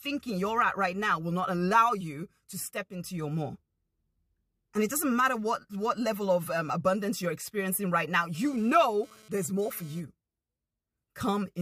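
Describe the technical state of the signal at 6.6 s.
At 6.6 s the signal is intact, with no dropout, distortion, or other fault to be heard at that moment.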